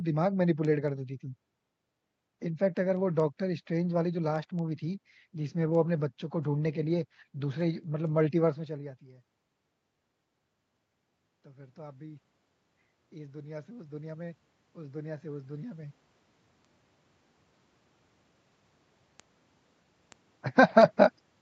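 Speech, with automatic gain rising from 11.43 to 16.0 s. The input drops by about 21 dB, and the gain control slowly adds about 10 dB, lifting voice and room noise together.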